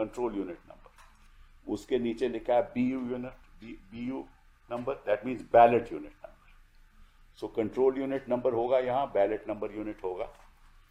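Nothing stood out as a technical fault on listening.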